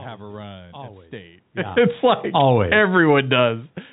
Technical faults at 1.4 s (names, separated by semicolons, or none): none